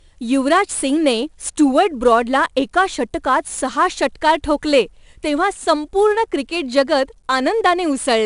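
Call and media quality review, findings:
4-bit ADPCM compression, throughout the speech. Gritty hiss riding on every loud syllable, rising and falling with level; roughness on sharp consonant onsets. Probable component: encoder in the media path storing each sample as a coarse 4-bit step from a predicted value, with adaptive step size lagging fast transients. Nothing above 10.6 kHz, a dull top end that fits a sample rate near 22 kHz and a stream around 89 kbps. Codec damage plainly audible.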